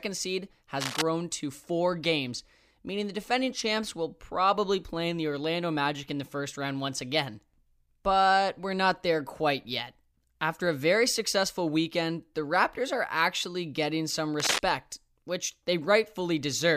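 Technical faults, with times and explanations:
0.81–1.02 s and 14.40–14.59 s, cable scratch noise: two bursts of dense, ragged crackle about a fifth of a second long, the first slightly below the speech level and the second about as loud. The likely cause is a worn cable or connector being moved, its contact resistance jumping rapidly. Unlike a single click or a dropout, each burst is a sustained rustle with no gap in the signal.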